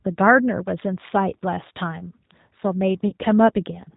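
From the start, the speech carries the sound of the G.729 codec, with plainly audible damage. The encoder discards the waveform and keeps only a vocal tract filter, a pitch estimate and a few pulses per 5 ms subframe, so the decoder rebuilds an approximation of the voice. The bandwidth stops at 4 kHz, which dulls sibilants, and the texture is rough and slightly synthetic, consistent with an 8 kbit/s link.

At 3.08 to 3.13 s there is VoIP packet loss concealed by the speech codec. About 40 ms of audio goes missing, which fits four lost 10 ms frames. With no data arriving, the decoder keeps repeating its last pitch and filter settings while lowering the gain. The gap is filled by a brief buzzy tone or coloured noise that fades rather than silence, and the voice sounds weak and smeared for a short while after packets resume, because each frame is predicted from the one before it.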